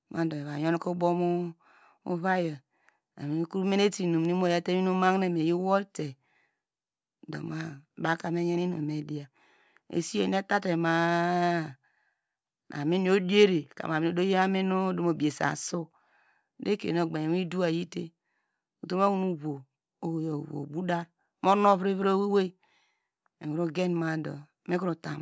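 Listening to this speech recording, nothing stood out as a technical problem at any point.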